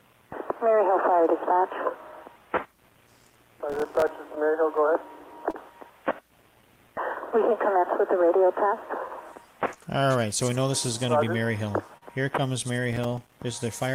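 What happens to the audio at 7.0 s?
At 7.0 s the audio sits inside a run of repeated timing corrections lasting from 0.30 s to 13.91 s, so this moment is one of many small splices rather than a single event. The receiver keeps inserting short repeated slices to stay in step, stretching playback to about 99% speed and adding roughly a fifth of a second over the span. If audible at all, it sounds like faint hiccups and a slightly unsteady tempo. On a waveform, look for tiny duplicated segments with abrupt joins; on a spectrogram, look for thin vertical seams where the texture briefly repeats.

Behind those edits is clock drift between sender and receiver, present across the whole clip. The sender's clock runs about 3% slow, so the jitter buffer keeps draining and the receiver must pad it by repeating material. This is why the corrections near 7.0 s all go the same way, lengthening the sound, and recur at uneven intervals. 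On a spectrogram, this shows as irregularly spaced discontinuities throughout the clip rather than one isolated glitch.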